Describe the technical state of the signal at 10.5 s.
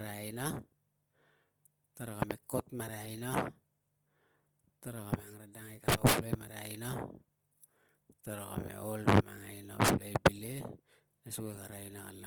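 At 10.5 s the speech shows plainly audible Opus compression damage, which runs through the whole clip. The likely cause is Opus in music (CELT) mode, at a rate that fits about 24 kbps. Starved bands are filled with folded or noise content, so tones sound grainy and rough, while the band still extends to 20.3 kHz.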